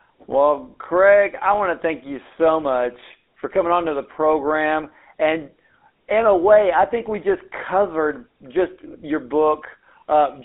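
Throughout, the speech is buzzy and gravelly, within 250 Hz to 3.6 kHz: GSM full-rate coding, consistent with 13 kbps, rebuilds it from sparse regular pulses.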